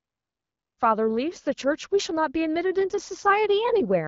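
No technical faults are present in this speech: the level rises at the start in a smooth, deliberate fade-in, and the AMR wideband (HD Voice) coding at 12.65 kbit/s stays within its normal range.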